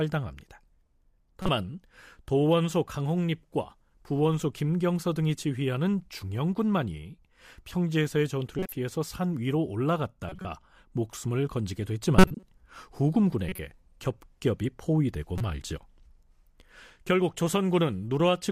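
Corrupt frames are decoded at 1.40–1.49 s, 8.59–8.72 s, 10.29–10.45 s, 12.18–12.43 s, 13.49–13.59 s and 15.38–15.41 s. Each burst spans a few damaged codec frames that the decoder played despite flipped bits, so misread gains and codes put energy at the wrong frequencies. These sound like short chirps and noise blips in the speech. The loudest peaks at about −5 dBFS near 12.2 s, and the faintest at about −25 dBFS near 10.3 s.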